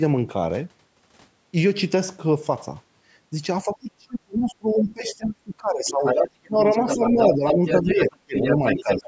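From 3.65 to 6.04 s, the echo canceller likely could not tell the talker from the loudspeaker echo during double talk, so speech is suppressed in double talk: the speech dips by up to roughly 30 dB. From 5.88 to 7.8 s, the other side's voice is leaking through, likely because echo cancellation left residue in the microphone. It sits only about 5 dB under the speech. Double-talk suppression then cuts the speech again at 6.47–6.59 s (about 20 dB), 6.82–7.63 s (about 10 dB), 7.81–8.35 s (about 35 dB) and from 8.57 s to the end (about 15 dB). Leaked scraps return at 8.01–8.1 s (about 10 dB down) and from 8.36 s onward (about 5 dB down).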